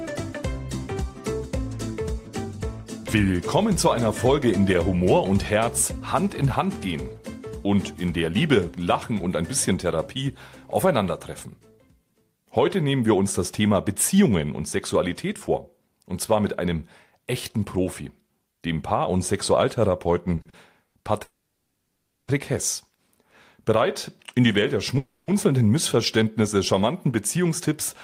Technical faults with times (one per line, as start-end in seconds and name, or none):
20.35-20.95 repeated stalls (stutter)
21.23-22.30 call audio freeze
24.24-24.95 jitter buffer speed-up
24.98-25.30 call audio freeze